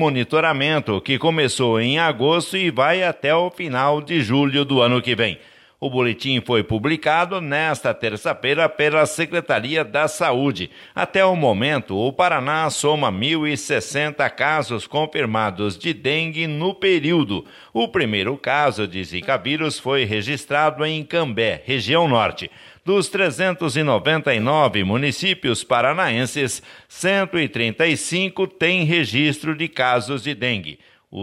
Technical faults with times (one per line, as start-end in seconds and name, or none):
none